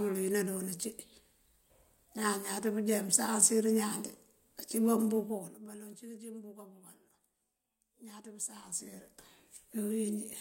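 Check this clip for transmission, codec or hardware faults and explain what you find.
Two bursts of zipper noise are present, both during level changes. The gain was applied in coarse, unsmoothed steps rather than as a continuous ramp. From 5.20 to 5.76 s, between "pësansir ñaan de acíba" and "cí këcí mëmbúka bukal", the level drops by about 15 dB in 3 dB jumps. From 8.45 to 9.47 s, it climbs back by about 15 dB in 2 dB jumps. Each jump puts a small discontinuity in the waveform. At roughly ten steps a second, this is heard as a ticking, zipping texture riding on the speech while the level moves.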